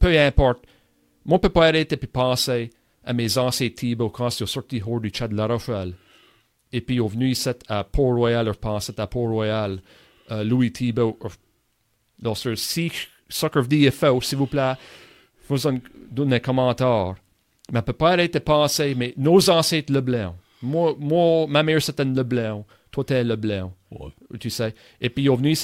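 No technical faults are audible anywhere in this speech recording.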